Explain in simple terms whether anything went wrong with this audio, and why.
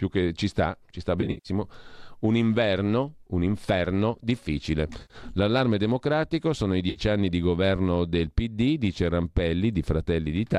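Three short glitches come from AAC frame loss with concealment, at 1.21–1.49 s, 4.98–5.16 s and 6.90–7.00 s. Data went missing from the stream, which is likely low-delay AAC. The decoder patched each gap from the last good sound, leaving brief smeared, noisy patches.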